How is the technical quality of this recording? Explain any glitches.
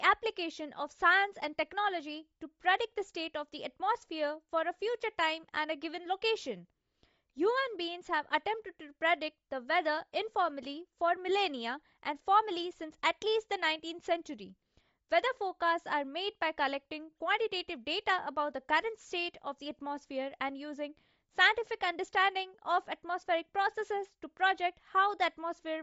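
The quality is held back by one problem that runs through the whole clip: plainly audible codec damage, most likely Bluetooth LC3 compression. The speech has nothing above 7.7 kHz, and the top of what remains sounds breathy and grainy. That fits a low-rate transform codec working in short frames, probably 10 ms, at something like 32 kbps. With too few bits it discards much of the upper spectrum and fills those gaps with shaped noise, which produces the rough, hissy edge on the voice.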